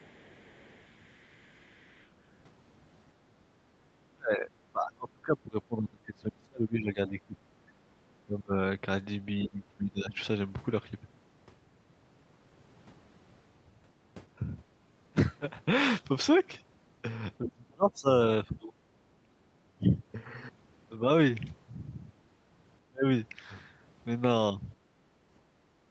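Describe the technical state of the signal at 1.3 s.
A faint second voice sits far beneath the speech until 2.08 s: the other side's voice leaking through, likely loudspeaker echo the echo canceller missed.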